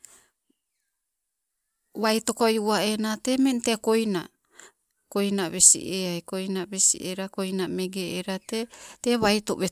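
No technical faults can be heard anywhere in this speech recording. Nothing in it calls for a fault description.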